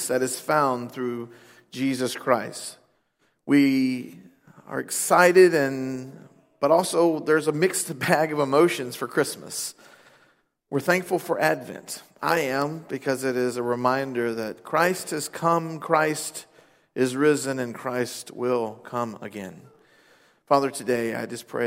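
Three bit error spikes sound as isolated sharp ticks at 6.78 s, 12.62 s and 13.41 s. Each is a single corrupted sample, about -30, -12 and -30 dBFS, from a flipped bit. Unlike a splice click, none bears any relation to the surrounding sound or waveform.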